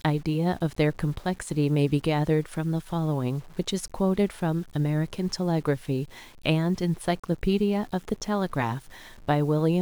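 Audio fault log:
throughout, low bit depth without dither: The speech was likely requantised to very few levels by plain rounding, with no dither added first, and the graininess fits roughly 7 bits. Because the rounding error tracks the waveform instead of sitting as a steady hiss, it becomes a gritty distortion that changes with the speech, at around 30 dB below the signal. Quiet syllables and decaying tails roughen most, and the faintest passages sputter or drop toward silence.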